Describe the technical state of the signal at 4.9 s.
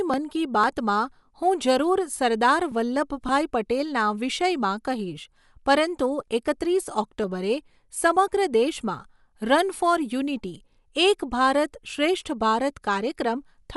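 At 4.9 s the speech carries the same coding damage heard across the whole clip, likely from Dolby Digital compression at a bitrate that points to about 64 kbps. Nothing survives above 11.5 kHz, and unfunded frequency lines are refilled with dither noise, giving a dull, rough flutter unlike a clean low-pass.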